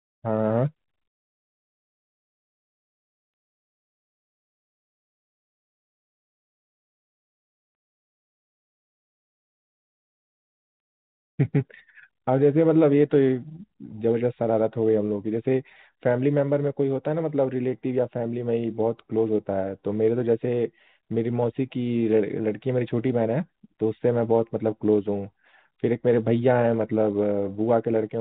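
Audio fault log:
3.04–9.22 s, jitter buffer speed-up: The speech runs about 6% fast here, yet its pitch does not rise. The receiver's jitter buffer had built up more audio than it wanted, as happens when late packets land in a bunch. To drain it, short slices of a pitch period or so were cut out again and again, around 0.4 s in all. The speech sounds hurried for those six seconds. Its narrowband tone, with nothing above 4 kHz, fits a G.711 call path.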